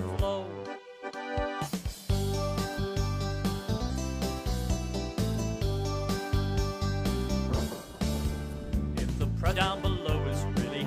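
Compressed frames are skipped at 2.74–2.79 s, 3.86–3.92 s, 5.34–5.39 s and 9.48–9.54 s: whole blocks of coded audio never reach the output, so the sound lurches forward by roughly 100, 200, 50 and 300 ms, steps that fit a frame length of about 46 ms. On a spectrogram, contours break and resume misaligned at each join.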